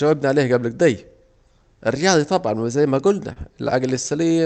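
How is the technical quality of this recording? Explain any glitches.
The recording has one clear glitch: a stretch of repeated stalls (stutter) in the speech toward the end, heard through a call codec whose top end stops near 8 kHz.

From 2.94 to 4.32 s, the speech drags and hiccups with ten brief holds, the longest about 33 ms. Packets arrived late, so the jitter buffer kept running dry and the receiver stretched the last sound each time. Nothing is lost.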